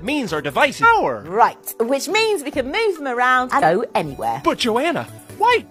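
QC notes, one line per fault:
0.79–0.85 s and 3.58–3.63 s: damaged data in a compressed stream. Two brief bursts of about 50 ms each. Corrupted bytes made the decoder misread those frames and lose sync until it found the next valid frame header.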